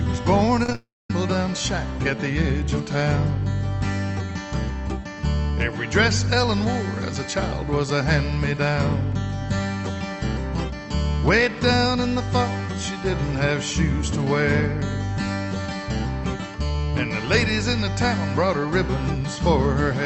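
The audio passes through an Opus call path whose top end stops near 8 kHz, which fits a modest bitrate around 32 kbps. From 0.63 to 0.75 s there is repeated packet loss, heard as choppy sound with pieces missing. Four short holes appear, the longest about 19 ms. Each is patched by repeating the last sound, so roughly half of that stretch is synthetic. From 0.75 to 1.10 s the sound turns into a fading buzz or hiss, then drops to near silence for about 0.22 s before returning with a section missing. This is likely a long network dropout, where no packets arrived and the receiver stretched the last sound until it gave out.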